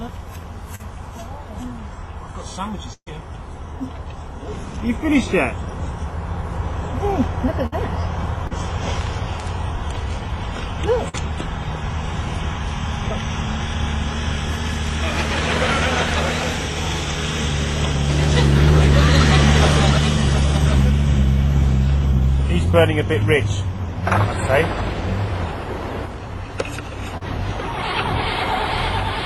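At 0.75 s there's a short concealed packet loss: about 40 ms never arrived in time, so the receiver patched it by extending the previous sound, leaving a quick smear. At 2.93 to 3.08 s comes a burst of packet loss. About 130 ms is filled with the last sound stretched out and fading, including roughly 60 ms of silence, and 140 ms of audio is skipped when playback picks up. Shorter bursts follow at 7.66 to 7.74 s and 11.09 to 11.15 s, each about 50 ms of fading fill with 60 ms and 40 ms missing. The short concealed loss returns at 8.47 to 8.53 s and 27.17 to 27.23 s, each a 35 ms gap smoothed over with a brief wobble.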